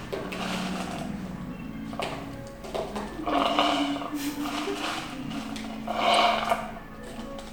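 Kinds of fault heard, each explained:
Corrupt frame decoded: flipped bits inside a compressed frame went undetected, and the decoder played out what looks like a couple of damaged frames with wrong gains and misread codes, throwing energy to the wrong frequencies and producing a brief chirp-like blip at 3.33 s.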